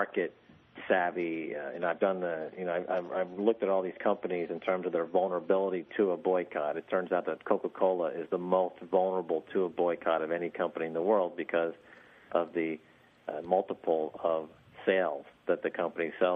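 For the first 6 seconds the audio is dull and smeared, with nothing above 6 kHz and strong codec artefacts, which fits an adaptive stream starting at a low bitrate, around 32 kbit/s MP3. At 6.0 s it steps up without a gap. On a spectrogram, the upper band fills in abruptly there.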